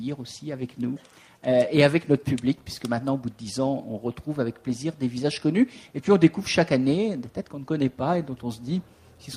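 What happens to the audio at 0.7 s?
Nothing goes wrong at 0.7 s; the audio plays through that moment intact, with no dropout, click or other fault.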